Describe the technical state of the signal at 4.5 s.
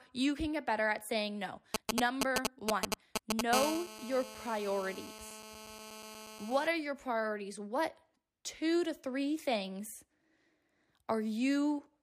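At 4.5 s a GSM phone buzz is present, running from 3.53 to 6.67 s, just before "are your priorities". A nearby 2G phone's 217 Hz transmit bursts are rectified by the audio circuit. It gives a steady, raspy, harmonic-rich buzz about 9 dB below the speech.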